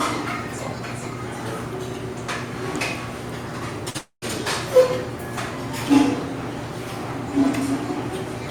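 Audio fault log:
3.90–3.97 s, short concealed packet loss: a brief smear lasting about 40 ms, where the sound seems to stall and wobble for an instant before carrying on. A few hundredths of a second of audio did not arrive in time. The receiver filled the hole for roughly 44 ms by extending the last sound it had, then blended back into the real signal. That patch is what produces the momentary blur rather than a clean cut.
3.98–4.25 s, long network dropout: immediately after the first gap, the sound stretches into a fading continuation, a buzz or hiss, and then falls to near silence for about 110 ms before the audio resumes further along. The likely cause is that nothing arrived for about 240 ms. The receiver spent around 235 ms concealing the gap, letting the last sound decay. What should have been heard there was never played, so the audio jumps ahead when it returns.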